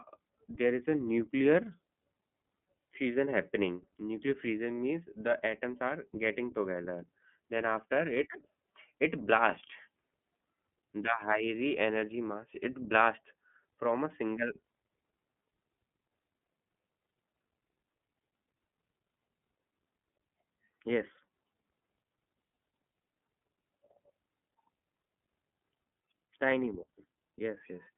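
From start to finish the speech carries iLBC codec damage, plainly audible as a slightly rough, synthetic edge on every sound. Each 30 ms frame's excitation is coded on its own, which fits iLBC's 13.33 kbps mode. The band is telephone-narrow, roughly 150 Hz to 3.4 kHz, sounding thin and muffled. On a spectrogram, energy stops at a hard ceiling near 3.6 kHz with nothing above, while the waveform looks ordinary.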